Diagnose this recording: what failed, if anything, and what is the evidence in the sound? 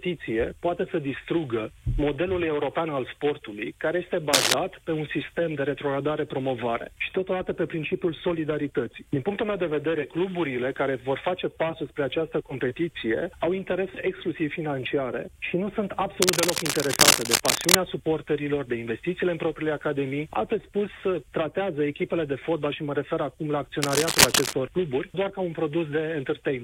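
Cable scratch noise in the analogue wiring: rough bursts about 5 dB over the signal at 4.33–4.54, 16.22–17.76 and 23.82–24.54 s, likely a worn contact's fluctuating resistance.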